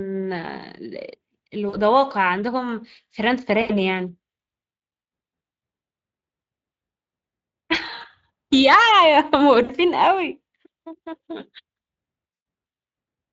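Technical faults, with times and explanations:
1.69–1.77 s, 3.61–3.81 s, 9.63–9.71 s and 12.33–12.43 s, VoIP packet loss concealed by the speech codec: the speech briefly turns buzzy and smeared, then fades and stays weak. Audio gaps of 40, 80, 60 and 100 ms were filled by the Speex decoder, which repeated its last pitch and filter at falling gain.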